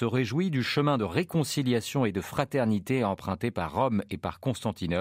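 No technical faults can be heard in this speech.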